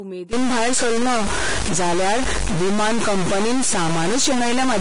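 The speech has most likely been coded with Vorbis compression at a low rate, with damage heavy enough to suggest something near 32 kbps. At that setting the encoder removes everything above 10.6 kHz and quantises the upper band so roughly that fine detail is replaced by noise of similar energy. The speech sounds dull at the very top and hissy and grainy below the cut-off, with roughened tones and smeared consonant attacks.

From 0.33 s until the end, a stuck bit is the likely cause of added distortion. A single data bit is held at one value, so about half of the samples are wrong by that bit's weight in a pattern that tracks the waveform. The result is a distortion laid over the voice, and because the error flips with the sign of quiet samples, the pauses fill with noise.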